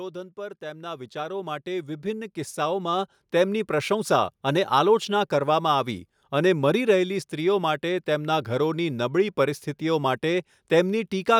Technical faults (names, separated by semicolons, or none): automatic gain rising